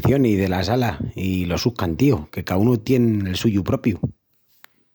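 No faults detected anywhere in the speech recording.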